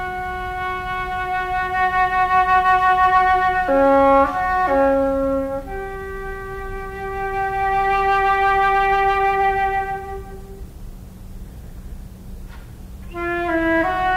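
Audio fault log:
No technical faults are heard anywhere in the signal.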